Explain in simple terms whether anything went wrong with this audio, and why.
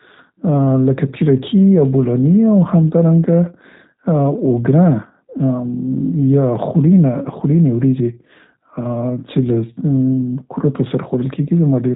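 Something did go wrong: the whole recording has passed through the G.729 codec, a phone-call compressor that rebuilds speech from a simplified model of the voice. Nothing above 3.8 kHz survives, so the speech sounds muffled, slightly rough and synthetic from start to finish.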